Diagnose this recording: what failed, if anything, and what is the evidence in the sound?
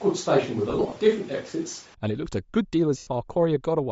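At the codec stage, the audio was likely squeezed through Bluetooth LC3 compression at a low bitrate, with the grain suggesting something around 32 kbps. The codec damage is plainly audible across the whole clip. A low-bitrate transform codec drops much of the upper spectrum and fills that region with shaped noise. That noise gives the speech a breathy, grainy edge on top of the real content.

At the capture stage, the clip opens already on what is likely a switch to a distant microphone. The close microphone's feed was missing, and a farther pickup was carrying the sound. From the start until 1.94 s, the speech sounds roomy and hollow, thinner in the bass, and sits over room noise about 25 dB down. The level barely changes at 1.94 s, but the tone snaps abruptly back to the close sound there.

At the network stage, there are lost LE Audio frames. The decoder conceals each gap by reusing the last spectrum with scrambled phase. 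Between 0.70 and 0.96 s, short dropouts are scattered across about 260 ms, totalling about 130 ms, with the longest run near 30 ms. They come through as brief noisy smears. A second single loss of 90 ms from 2.98 to 3.07 s smears the speech into noise. Both losses fit 10 ms frames.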